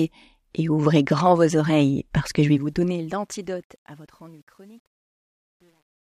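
From 2.42 s to the end, the speech fade-out shows truncation distortion on a fade: the gain stage drops low bits without dither, which fits roughly 10-bit resolution. As the level falls, the waveform steps coarsely, turning gritty, worst from 3.63 to 6.05 s.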